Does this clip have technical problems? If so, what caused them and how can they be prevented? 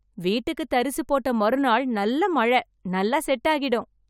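No, there are no technical faults to report in this speech recording, so nothing needs preventing.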